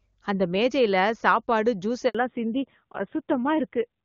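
At about 2.09 s there's a handover gap: the call jumps networks, no frames come through for roughly 60 ms, and the sound just drops out until 2.15 s. Whatever was said in that stretch is gone, with nothing filling the hole.

Right after, from 2.15 s to the end, the call falls back to narrowband. Before the switch it's clean HD Voice, consistent with AMR-WB at its top rate. Afterwards nothing above 4 kHz survives, so the sound turns duller and rougher, which fits AMR-NB at around 7.4 kbit/s.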